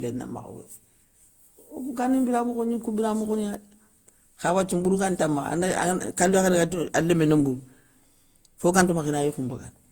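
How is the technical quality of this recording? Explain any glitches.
The recording's noticeably degraded. Throughout, the speech sounds swirly, smeared and hollow, with blurred consonant onsets, which is classic generation loss, likely from re-encoding about seven times through a lossy codec like Opus at around 64 kbit/s.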